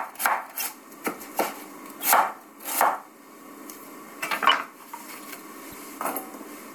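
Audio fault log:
0.58–0.62 s, 2.00–2.04 s, 4.49–4.54 s, 5.69–5.74 s: corrupt frame decoded. Each time, flipped bits damaged a couple of compressed frames of this everyday-sound recording, and the decoder still played them. Misread gains and codes put energy at the wrong frequencies for roughly 40–54 ms, heard as a short chirp or noise blip. The loudest, near 4.5 s, peaks around -10 dBFS, and the faintest, near 5.7 s, sits far lower at about -30 dBFS.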